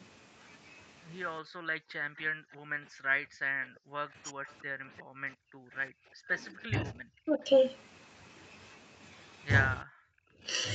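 From 1.41 to 3.96 s the room sound behind the speech sinks by up to about 40 dB for roughly two seconds, then comes back. This is background gated by the echo canceller, which clamped the microphone hard while the loudspeaker was playing. At 4.24 to 4.39 s the talker briefly drops by roughly 30 dB, likely speech suppressed in double talk, where the canceller, unable to separate its own talker from the loudspeaker echo while both sides spoke, turned everything down. From 4.49 to 4.62 s a faint delayed copy of the voice trails about 352 ms behind, roughly 30 dB under the speech. This is likely echo leak, a remnant of loudspeaker pickup the canceller failed to remove and sent back. The background gating returns from 4.67 to 6.29 s (up to about 37 dB, about a second in total). The talker dips again from 6.66 to 7.44 s by around 25 dB for about half a second, and at 9.82 s cuts out sharply for a moment. 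A last short gating of the room sound, up to about 29 dB, follows from 10.18 to 10.43 s.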